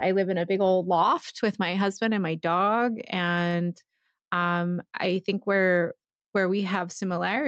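A speech recording with gain pumping throughout. The gain swings by around 5 dB. Loud and soft parts sit closer together, so the sound is squashed. The likely cause is gain set too high, with a fast limiter or compressor pulling it back on each loud sound. There is also a short stall from a late packet, from 3.49 to 3.65 s, just after "husband and my dog". A packet arrived late and the jitter buffer ran dry. The receiver held the last sound for about 35 ms, then resumed from the same point. Nothing is lost, but that moment drags. The call codec's band ends near 8 kHz, which fits Opus in wideband mode.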